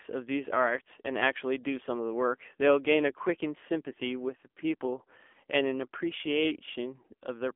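A short speech clip that's been through an AMR narrowband mobile codec the whole way through. The sound sits in a telephone band of roughly 250 Hz to 3.4 kHz, with nothing at all above 3.5 kHz, so it's thin and boxy. The codec damage is plainly audible, with that buzzy, synthetic edge you get when a vocal-tract model and a handful of pulses per subframe rebuild the voice. The degradation points to one of the lower AMR-NB modes, around 7.4 kbps.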